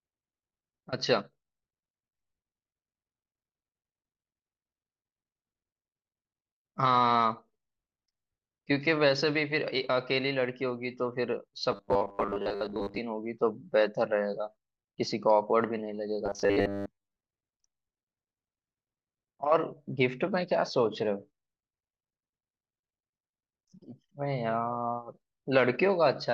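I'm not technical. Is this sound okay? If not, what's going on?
No. From 11.72 to 12.98 s and again from 16.26 to 17.19 s, the speech turns into a stiff metallic buzz at 100 Hz. This is robotic sound from repeated short buffers, likely caused by 10 ms audio chunks being replayed over and over while most of the real sound is skipped.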